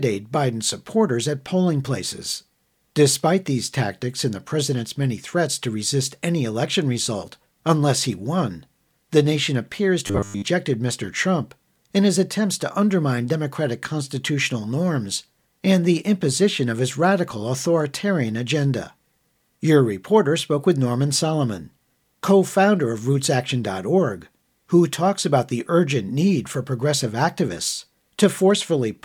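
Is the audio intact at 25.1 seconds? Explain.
Yes, the speech at 25.1 seconds is intact, with no audible fault at that moment.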